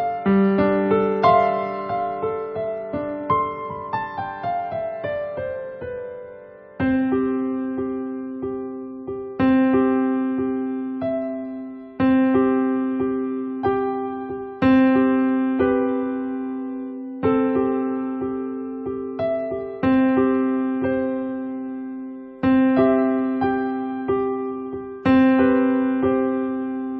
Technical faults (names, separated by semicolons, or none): none